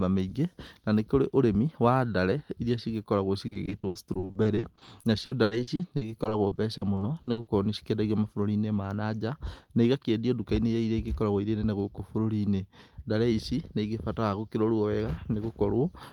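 Repeated packet loss (robotic sound) runs from 3.47 to 7.49 s, after "wa ndare irĩa cĩgĩkoragwo": dozens of dropouts up to 80 ms, each patched by extending earlier sound, leaving choppy, robotic speech.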